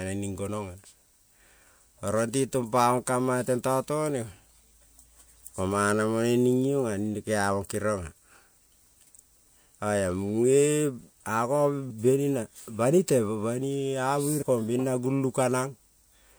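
Compressed frames skipped in this speech recording: the decoder drops whole frames, so the audio jumps ahead at 11.89 s (about 150 ms lost) and 14.41 s (about 100 ms).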